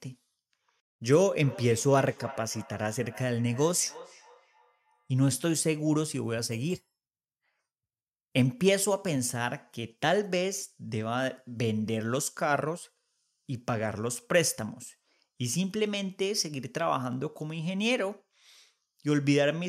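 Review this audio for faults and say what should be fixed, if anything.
From 1.37 to 5.35 s there is feedback echo between two devices: a second device in the same room is on the call and plays back this microphone's signal, which the microphone then captures again. Its echo canceller only knows its own playback, so it lets this loop through. The speech returns roughly every 0.3 s, thinner and ringier with each pass, the loudest repeat sitting about 18 dB below the direct speech. Keeping only one device joined to the call in that room, or muting the other's speaker and microphone, prevents it.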